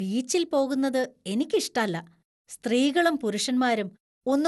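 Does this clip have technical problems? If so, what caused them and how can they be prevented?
Yes. The speech has generation loss throughout the clip. It sounds swirly, smeared and hollow, and consonant attacks are blurred. Nothing is left above about 11.9 kHz. The likely cause is repeated lossy encoding, around four passes, with a character that fits MP2 at about 96 kbit/s. Each pass quantised on a shifted frame grid, so noise piled up. To prevent it, keep a lossless master and encode only once, at the end.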